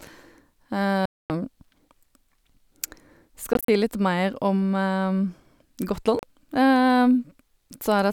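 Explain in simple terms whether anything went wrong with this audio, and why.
Bluetooth dropout at 1.06 s, 3.53 s and 6.19 s: the speech drops to silence, likely from late wireless packets, then resumes further on, with that stretch of audio gone.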